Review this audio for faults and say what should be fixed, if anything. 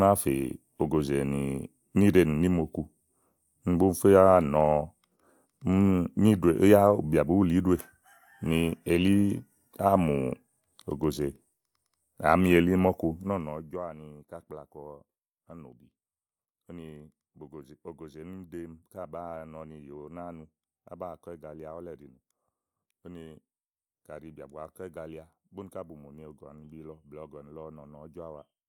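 Nothing here needs fixing; the speech runs without any audible fault, and the level moves as smoothly as it should.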